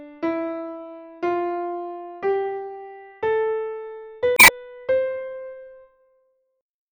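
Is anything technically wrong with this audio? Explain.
Yes. From 4.35 to 4.5 s there is a brief burst of corruption. This is damaged data in a compressed stream: corrupted bytes made the decoder misread those frames, lose sync and skip ahead to the next valid frame header.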